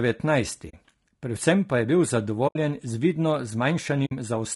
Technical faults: low-delay AAC compression; AAC frame loss with muting

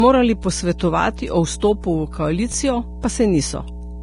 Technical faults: mains hum; low-bitrate audio saved at a high bitrate; chunks out of order

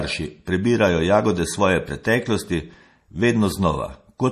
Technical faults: MP3 compression

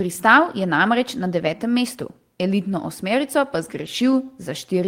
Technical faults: lost packet rebuilt from error correction

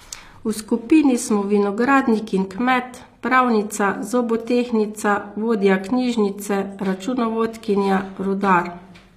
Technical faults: HE-AAC compression

